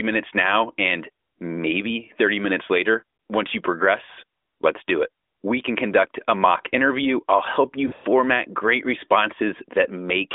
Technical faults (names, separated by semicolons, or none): lost AMR speech frames